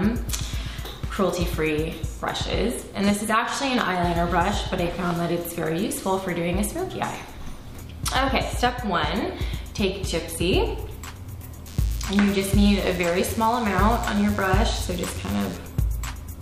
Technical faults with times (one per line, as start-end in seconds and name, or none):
11.68-15.57 DECT cordless phone buzz